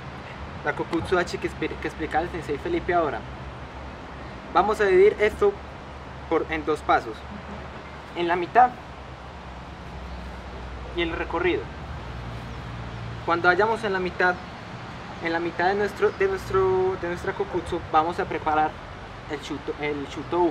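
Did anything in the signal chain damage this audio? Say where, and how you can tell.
No, nothing in the signal chain stood out as a problem when listening to this audio.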